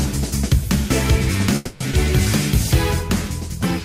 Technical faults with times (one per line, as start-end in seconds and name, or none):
1.55-1.82 call audio freeze
1.92-1.95 skip ahead